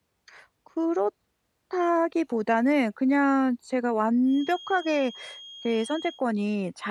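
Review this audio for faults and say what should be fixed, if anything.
A feedback whistle runs from 4.23 s to 6.24 s. It is a thin, steady tone at 3.3 kHz, sitting roughly 20 dB under the speech. Its level swells and fades slowly but never builds. The likely cause is a loudspeaker-to-microphone loop held just at the edge of feedback. At that frequency the loop gain is close to one, so the tone keeps itself going without running away. To prevent it, lower monitor gain or notch 3.3 kHz in the speaker feed.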